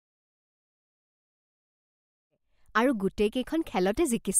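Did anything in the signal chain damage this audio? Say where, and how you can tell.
No, nothing in the chain has damaged this speech; the one thing you'll notice is a smooth fade-in, easing up from around 2.5 s to full level by 2.95 s, just the gentle ramp an editor would put in, with no click or hard edge anywhere.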